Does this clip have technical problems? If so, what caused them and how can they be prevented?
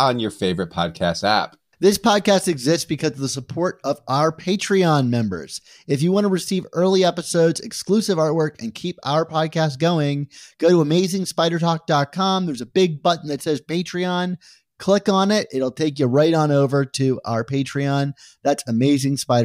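No, there are no technical problems in this clip.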